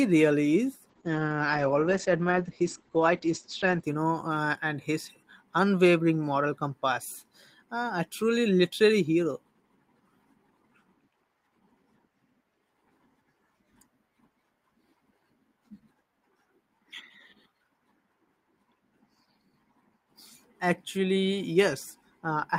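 From 0.9 to 3.89 s, after "really is", a call bitrate drop starves the encoder, which fits a fall from 32 to 10 kbps. The band narrows from 20 kHz to 8 kHz for about 2.9 s, so speech sounds muffled and coarse until "you know uh and".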